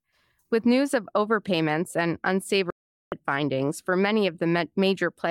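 At 2.70 s, right after "news of overpayments and", the speech simply drops out until 3.12 s, and it comes back on "findings for many". That's a digital broadcast dropout. The receiver stopped getting usable frames, so it muted rather than play garbage. The gap is about 0.42 s, which fits roughly a dozen lost frames. Whatever was said in that stretch is gone for good, not just quiet.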